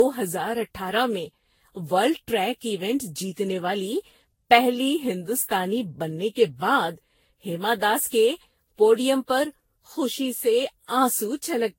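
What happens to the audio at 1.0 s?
At 1.0 s the speech sounds swirly, smeared and hollow, with blurred attacks, as it does throughout. This generation loss likely comes from around ten successive Vorbis encodes near 56 kbit/s. A spectrogram shows flickering spectral holes and nothing above 16.6 kHz.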